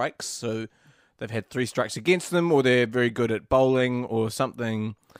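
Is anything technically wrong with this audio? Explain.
No, nothing is technically wrong with this speech recording. There is nothing here that calls for a fix.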